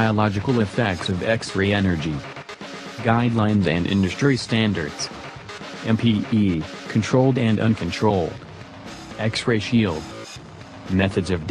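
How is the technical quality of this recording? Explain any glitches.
No glitches or faults detected.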